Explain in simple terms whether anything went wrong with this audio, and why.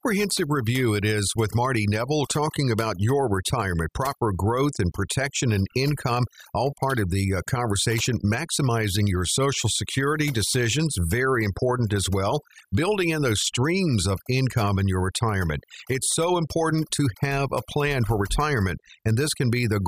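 Overdone noise removal affected the whole recording. A noise reduction tool was set too strong, so it switched off bands of sound it mistook for noise, taking quiet parts of the speech with them. The background drops and breaks up into twinkling specks.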